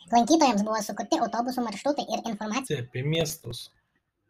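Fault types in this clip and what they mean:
Section at the wrong speed: From the start to 2.67 s the speech runs 1.67 times too fast. Pitch and pace shift together, so the voice sounds high and hurried, raised by about ten semitones. The cause is likely a playback or edit step that fitted this part to the wrong clock. After 2.67 s the speed returns to normal, and the change is heard as a sudden drop in pitch and tempo.
Processor overload crackle: From 3.15 to 4.05 s a gritty, tearing crackle rides over the speech. The processor is missing its deadlines for small audio buffers, over and over. Each miss repeats a short piece of old audio with hard edges. The rate of the grit fits buffers of around 5 ms, with some twenty misses packed into this stretch. It stops when the load eases, just before the end.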